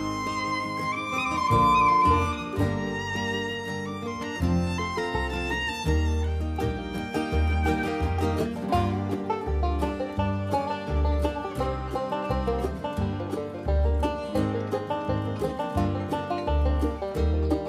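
At 0.93 s a loudspeaker feedback squeal kicks in. The mic is clearly hearing the speaker it drives, and at 1 kHz the loop gain tips over one, so that frequency keeps feeding itself. You hear a single tone swelling up over roughly 0.7 s until it sits about 5 dB above the rest of the sound, then it cuts out at 2.46 s.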